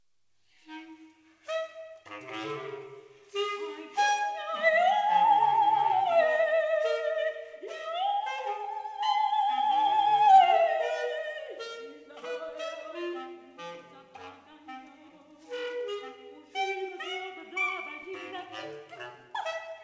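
No faults detected; the audio carries the expected band limit at 8 kHz from the call path, consistent with a wideband codec such as G.722.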